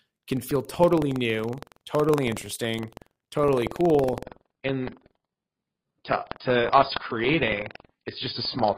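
Buffer tearing runs through the whole clip. A robotic buzz sits at about 21.5 Hz, which fits a 2048-sample buffer. A small slice of each buffer repeats audio roughly a fifth of a second old.

At 4.25 s, just after "totally interesting totally cool", the adaptive stream drops to a lower bitrate until the end. Nothing remains above 5.1 kHz, pointing to AAC at around 16 kbit/s rather than 96.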